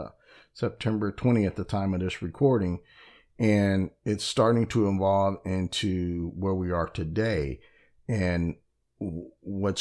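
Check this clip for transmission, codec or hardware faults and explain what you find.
Nothing in the speech stood out as a transmission, codec or hardware problem when I listened.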